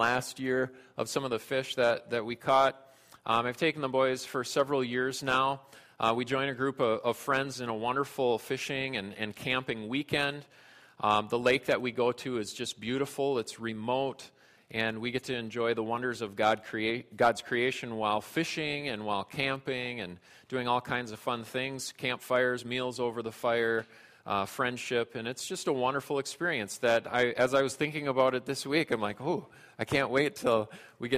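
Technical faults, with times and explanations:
No technical faults can be heard anywhere in the audio. There is nothing here that needs a time or an explanation.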